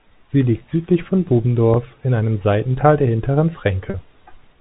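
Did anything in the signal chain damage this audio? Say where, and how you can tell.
Yes, at the network stage: packet loss with pitch repetition, heard twice in this speech. At 1.74 s, right after "liegt südlich von" and before "in einem", a gap of about 20 ms (one 20 ms packet) is bridged by the last pitch period looping as a brief buzzy hold. At 3.90 to 3.94 s a 40 ms gap, about two packets, gets the same held buzz with a slight fade. On a waveform, identical cycles repeat; on a spectrogram, the harmonics freeze flat. The G.711 telephone band is heard as a cut above 4 kHz.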